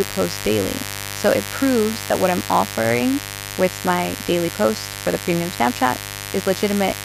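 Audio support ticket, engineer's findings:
Mains buzz, whole clip. Steady raspy buzz on 50 Hz mains, harmonics running up into the kHz range, sitting only around 10 dB under the speech. Probable culprit: a dimmer, rectifier or unshielded cable. Sharp switching spikes twice per mains cycle leaking in. Check grounding and shielding first, mate.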